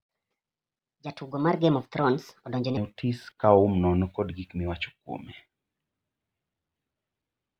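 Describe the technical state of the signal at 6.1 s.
At 6.1 s the speech signal is intact, with no dropout, distortion, glitch or other technical fault.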